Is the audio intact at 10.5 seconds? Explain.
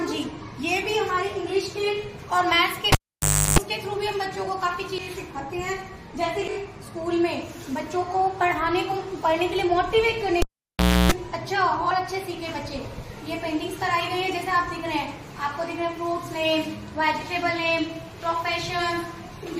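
No. At 10.5 seconds you're right inside a cable pulled and plugged in event that runs from about 10.42 to 11.12 s. The live lead gets yanked, so there's a pop and then the sound drops to near silence for about 0.65 s. As it's pushed back in, the tip touches before the connector seats, giving roughly 0.31 s of 60 Hz mains buzz, and a second pop marks the audio coming back.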